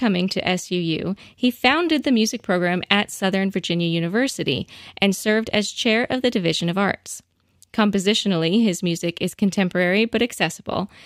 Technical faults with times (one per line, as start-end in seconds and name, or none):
none